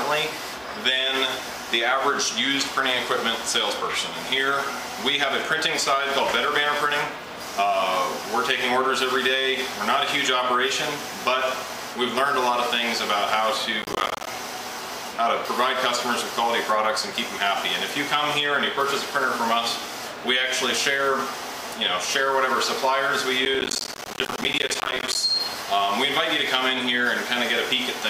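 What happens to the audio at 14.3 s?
Right around there a burst of processor overload crackle is just finishing; it runs from 13.82 to 14.27 s. The processor keeps missing its deadlines for buffers of around 10 ms, dropping dozens to silence, so the sound turns gritty and torn until the load eases.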